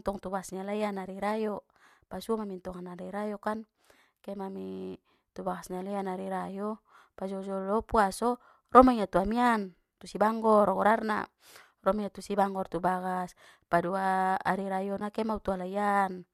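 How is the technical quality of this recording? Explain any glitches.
There's one glitch, near the end. At 15.00 s there's an AAC frame loss with muting: one 10 ms frame went missing and the decoder zeroed it. The overlapping windows fade the sound out and back in, so you get a quick, soft-edged dropout. Around it, the low-delay AAC compression, likely AAC-ELD as in a call setup, leaves only light coding texture.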